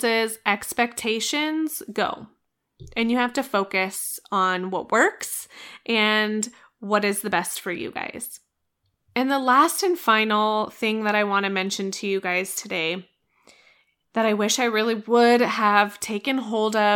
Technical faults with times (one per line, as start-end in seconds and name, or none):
none